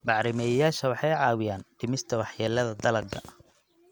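Speech with no audible faults.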